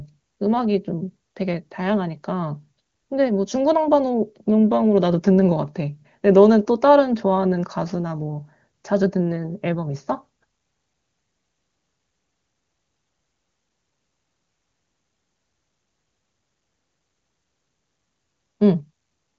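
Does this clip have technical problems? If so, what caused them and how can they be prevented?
No, there are no technical problems to point to in this speech clip. It comes through the AMR wideband (HD Voice) codec at a high rate that fits about 24 kbit/s, where the coding leaves at most a faint trace on the speech.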